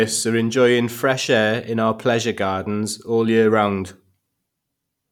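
No technical faults are audible in this recording.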